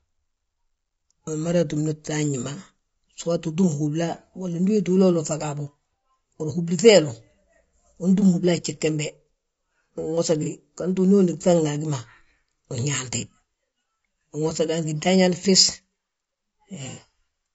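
Across the whole speech clip the voice sounds rough and grainy, with noise filling the gaps between harmonics and a thin, synthetic-sounding top band. This is likely low-delay AAC compression such as AAC-ELD: its short frames resolve pitch harmonics poorly, and the plainly audible damage fits a bitrate of around 32 kbps.

At 10.43 to 10.48 s there is a brief smeared, noisy patch, consistent with one lost AAC frame, about 30 ms, with concealment. The decoder rebuilt the gap from the last good spectrum. A longer patch of the same kind at 16.91 to 16.99 s suggests two consecutive lost frames, about 60 ms.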